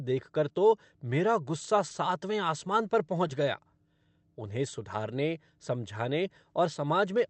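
Around 3.27 to 3.31 s there's a short concealed packet loss. About 20 ms of the speech never made it to the decoder in time, so the receiver papered over the gap by extending what it had just played, pitch-following if voiced, shaped noise if not, and then cross-faded back into real audio. You hear it as a quick smear or wobble, and a brief consonant there could simply drop out. The call path itself has its top end stopping near 8 kHz, which fits Opus at a moderate bitrate.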